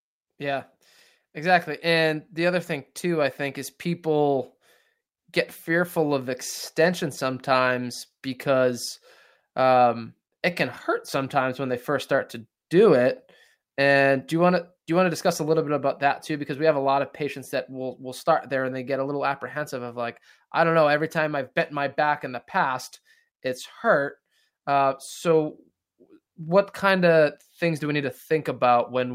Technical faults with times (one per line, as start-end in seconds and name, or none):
0.00-29.15 clock drift between sender and receiver
0.38-28.92 repeated timing corrections